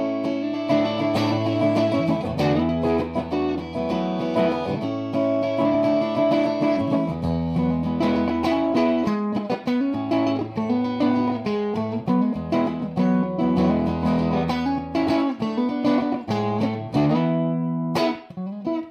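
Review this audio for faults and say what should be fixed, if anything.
Compressed frames are skipped at 3.54 s and 5.74 s. Each time, about one 26.1 ms frame goes missing, and the audio jumps ahead with a short smeared blip. Prevent it by checking file integrity and fixing damaged frames before decoding.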